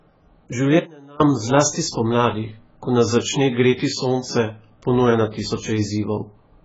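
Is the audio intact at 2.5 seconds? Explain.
No. At 2.5 seconds the speech sounds dull and smeared, with a warbling, fizzy texture on sustained sounds and sibilants, and nothing above about 7.7 kHz. This holds across the whole clip. The likely cause is heavy AAC compression (AAC-LC) at a very low bitrate, consistent with roughly 12 kbps. The encoder drops the top of the spectrum and quantises the remaining bands coarsely, leaving gaps and substitute noise that shift from frame to frame.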